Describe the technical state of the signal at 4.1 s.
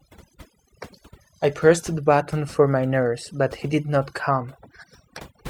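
At 4.1 s, as across the whole clip, the speech carries overdone noise removal. A noise reduction stage set too aggressively pulls individual frequency bands down or shuts them off whenever their level sits near its noise estimate, and the softer parts of the voice fall below that line too. The result is a lowered background dotted with twinkling specks.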